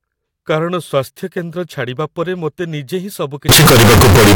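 From 3.49 s to the end at 4.35 s, the speech abruptly turns extremely loud and harsh, with background noise pushed up to the same level as the voice, though pitch remains traceable. The cause is likely float read as integer: samples that fit 32-bit floating point being read as 32-bit integers, so sign and exponent bits dictate amplitude. The waveform becomes a near-square block at an almost fixed, high level, and the spectrogram fills with dense broadband energy.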